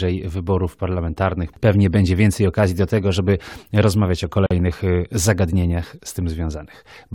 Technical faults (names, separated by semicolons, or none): gap at a join of encoded pieces